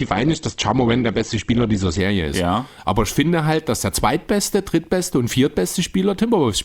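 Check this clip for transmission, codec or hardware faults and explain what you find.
One fault: the adaptive stream starts at a low bitrate. From 0 to 2.0 s the speech is thin and smeared, with nothing above 8.2 kHz. The spectrogram shows a flat ceiling there, which fits a low-rate Opus stream near 12 kbit/s. While the player measures the connection, it stays on that cheap version, then steps up to a richer one, around 64 kbit/s. At 2.0 s the full band appears abruptly, with no gap in the waveform.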